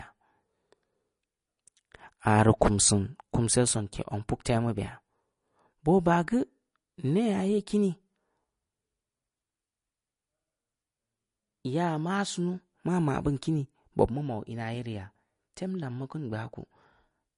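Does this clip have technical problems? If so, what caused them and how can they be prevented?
Yes. MP3 compression damage runs through the whole speech clip. Nothing is left above 10.6 kHz, and the sound has a plainly audible watery, swirling quality, with s sounds turning metallic and chirpy. The likely cause is an MP3 encoder short of bits, pointing to a rate around 40 kbps. It cut the treble at a fixed frequency and dropped weak spectral detail that flickers on and off between frames. To prevent this, record and deliver speech at 128 kbps or higher, or in a lossless format.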